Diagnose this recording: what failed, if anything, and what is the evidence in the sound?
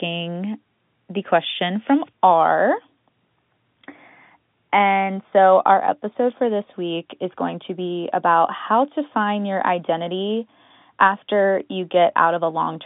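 Nothing failed in this recording, and the only thing the sound shows is the ordinary narrow band of G.711 telephone coding, with nothing above about 3.8 kHz.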